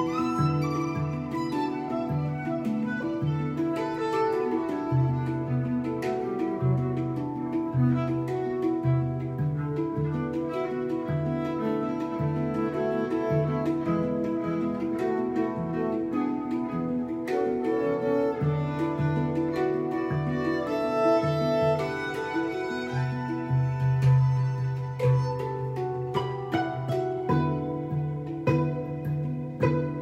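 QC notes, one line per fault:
No faults found. Nothing in the audio calls for a QC note.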